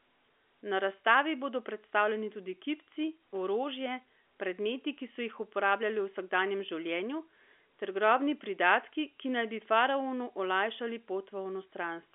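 Nothing stood out as a fault on listening to this speech, which comes across with the narrow bandwidth of ordinary G.711 telephone coding.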